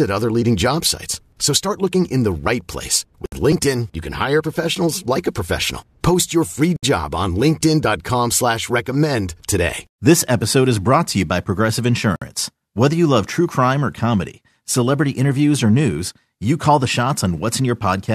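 At 3.26 s after "in the right place", 6.76 s between "your free" and "job on", and 12.16 s, the speech breaks off in a gap of about 65, 66 and 57 ms. These are gaps at joins of encoded pieces: untrimmed encoder delay and final-frame padding left in, with smeared edges.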